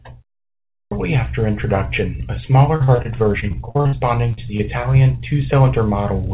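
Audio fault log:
0.70 to 0.91 s, clipped start after a pause. After about half a second of silence, the output path was still waking up, so the first 0.21 s of speech is swallowed. The sound begins abruptly, its opening sounds cut away.
2.76 to 3.95 s, repeated packet loss (robotic sound). Between "after introduction a" and "to the", twelve gaps left holes up to 57 ms long. Each was patched by extending the last sound, about 30% of the stretch. Speech turns choppy and robotic.
4.33 and 4.57 s, short concealed packet loss. Around "to the", about 40 ms and then 20 ms failed to arrive in time. The receiver continued the preceding sound to fill each hole, then blended back. Each heard as a brief smear or wobble.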